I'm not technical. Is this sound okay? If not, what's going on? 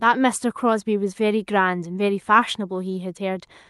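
Yes, this speech sounds fine; it has come through an ordinary internet call connection, and nothing went wrong along the way.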